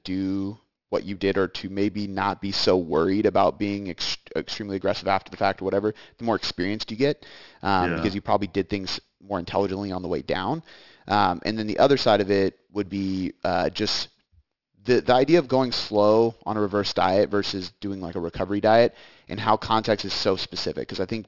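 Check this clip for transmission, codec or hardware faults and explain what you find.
One fault runs through the whole clip: aliasing. The speech was resampled down without an anti-aliasing filter, in a way that fits a drop from 44.1 kHz to 12 kHz. Energy above 6 kHz folds back into the band at roughly 15 dB below the speech, so sibilants turn gritty and metallic and the spectrum runs hard up to the 6 kHz edge.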